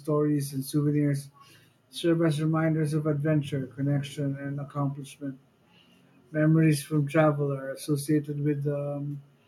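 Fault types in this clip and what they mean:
No faults detected on listening; nothing to log.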